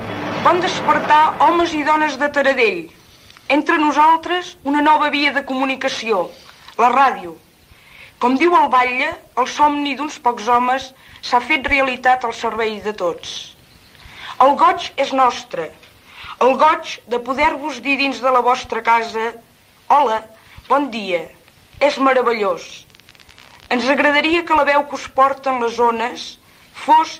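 No technical faults can be heard anywhere in the clip.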